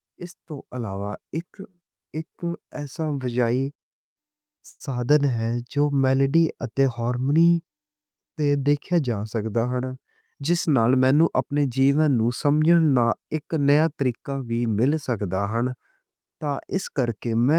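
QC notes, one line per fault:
4.69 to 4.82 s, call audio freeze: the speech stops for about a tenth of a second and is replaced by a short buzzy continuation of the last sound, which fades and ends in roughly 20 ms of silence before the speech resumes exactly where it left off. The likely cause is packets held up in transit that left the jitter buffer empty, so the receiver filled about 107 ms by extending what it last had. Nothing is lost, but everything after this point plays 107 ms later.
10.01 to 11.42 s, jitter buffer speed-up: just before "اپنے جیون نوں" the speech sounds slightly rushed, running at about 108% of normal speed while the pitch stays the same. The jitter buffer was holding more audio than its target, so the receiver trimmed many tiny pieces, each one or a few pitch periods long, one after another. Together these cuts remove roughly a tenth of a second and pull the delay back down.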